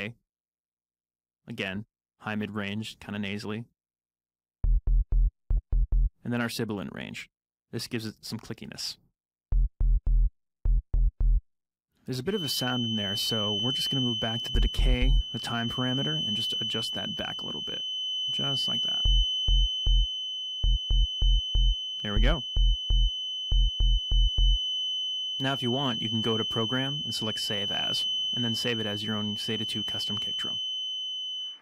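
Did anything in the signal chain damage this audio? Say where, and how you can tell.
Yes, at the acoustic stage: a feedback whistle, a steady 3 kHz tone just under the sound from 12.25 s onward, likely a loudspeaker-microphone loop held near oscillation.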